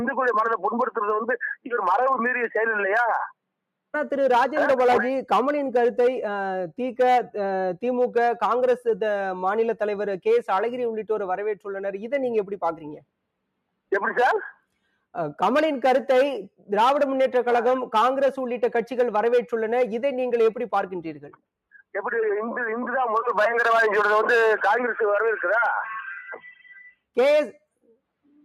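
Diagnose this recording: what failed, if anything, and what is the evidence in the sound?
The call-processing stage failed: sound cut by the noise suppressor from 21.17 to 21.41 s. For about a fifth of a second, level sinks by up to about 18 dB and any tail is clipped short, because the suppressor classed this material as background noise and attenuated it.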